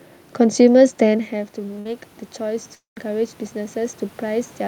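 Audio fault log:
1.08–4.67 s, automatic gain rising: after the level at the microphone falls by about 14 dB near 1.0 s, the gain creeps back up over several seconds. The room noise swells along with the voice, which separates it from a talker simply moving closer.
1.79–1.87 s, burst of packet loss: for about 55 ms the last sound is stretched into a fading buzz or hiss, then audio resumes about 60 ms further on. It is short and fades without reaching silence, unlike a full dropout.
2.75–2.98 s, long network dropout: the sound is held and fading for roughly 210 ms, with about 140 ms of that falling to silence, and about 220 ms of audio is skipped, likely because the network stopped delivering. The silent stretch sets it apart from a brief packet-loss burst.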